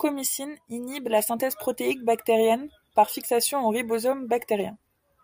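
Nothing technically wrong turns up anywhere in this short bit of speech, so there's no fault to point to and no time to mark.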